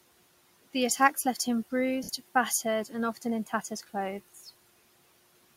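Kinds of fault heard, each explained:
Noise suppressor artifacts: Throughout the clip a noise suppressor pulls down the bands it judges to be steady noise, by about 17 dB. The background drops between phrases and returns under the speech.
Pre-emphasis left on: From the start to 2.71 s the treble is too strong. A recording boost, shaped like the CD 50/15 µs curve, was never undone. Highs near 10 kHz sit about 8 dB above 1 kHz, so the speech sounds bright, thin and sibilant.
Lost LE Audio frames: From 2.03 to 2.09 s, about 60 ms of Bluetooth LE Audio is missing. The LC3 decoder fills the gap by repeating the last spectrum with scrambled phase. The sound there turns into a brief noisy smear instead of clean speech.
Speech cut by the noise suppressor: The suppressor mistakes some speech for noise. It turns it down by about 9 dB between 3.46 and 3.64 s, and by about 10 dB between 4.34 and 4.48 s. 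Each time, a short stretch sounds swallowed and faint.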